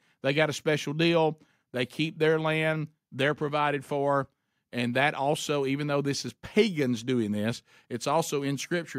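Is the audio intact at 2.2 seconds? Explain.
Yes, the speech at 2.2 seconds is intact, with no dropout, click, distortion or other fault at that point.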